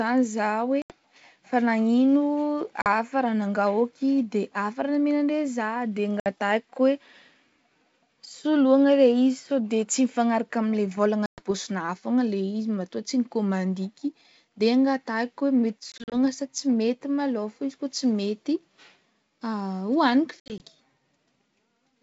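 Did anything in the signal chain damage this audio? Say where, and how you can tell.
Yes, at the network stage: packet loss on an ADPCM call. Hard-edged silent gaps at 0.82, 2.82, 6.2 and 11.26 s (40–120 ms) and scattered dropouts across 15.92–16.15 and 20.4–20.61 s leave the G.722 decoder's predictor and step size out of step, so speech resumes slightly distorted.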